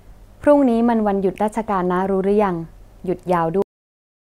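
At 3.62 s the speech is severed by a cut-off end: the final stretch of audio never reached the output, so the signal stops partway through a sound rather than finishing naturally. There is no decay or room tail, just an abrupt drop into digital silence that lasts for the remaining 0.77 s. On a waveform the trace falls straight to a flat line; a spectrogram shows energy ending at a hard vertical edge followed by blank black.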